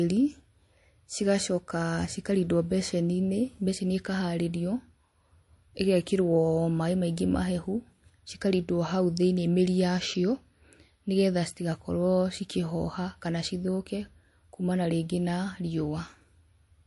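Throughout, MP3 compression likely explains the watery, swirly speech, with chirpy s sounds and nothing above 11.3 kHz, which fits a low bitrate near 48 kbps. A spectrogram shows a flat ceiling and flickering gaps.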